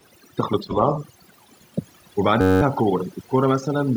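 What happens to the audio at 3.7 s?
At 3.7 s the audio carries overdone noise removal, present across the whole clip. The reduction pushes individual frequency bands near the estimated noise floor almost to silence, leaving twinkling specks in the background. A noise gate, by contrast, would mute everything at once.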